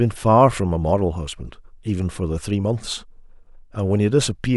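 Nothing technically wrong turns up anywhere in this short bit of speech, so there are no times or causes to give.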